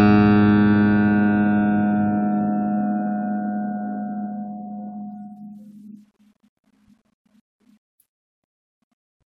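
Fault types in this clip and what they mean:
No technical faults can be heard anywhere in this music clip; the signal stays intact and continuous throughout.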